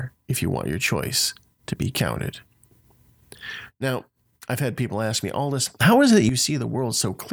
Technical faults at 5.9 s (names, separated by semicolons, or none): sudden gain jump